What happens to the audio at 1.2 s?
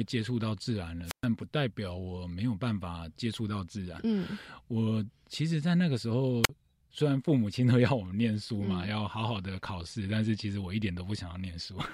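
At 1.2 s the speech is inside a wireless microphone squelch dropout running from 1.05 to 1.25 s. The radio link fades, hiss briefly rises, then the receiver's squelch mutes the output for about 122 ms before the voice returns. On a spectrogram this shows as a short band of broadband noise followed by an almost empty column; the waveform flattens to near zero across the mute.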